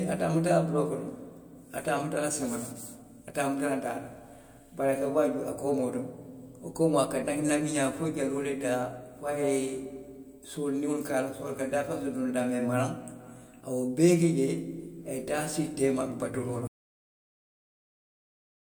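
At 16.67 s, just after "teema baturoo la", the speech has a cut-off end: the final buffers were never written out, so the sound stops mid-utterance and falls straight to digital silence with no natural decay, staying silent for the last 2 seconds.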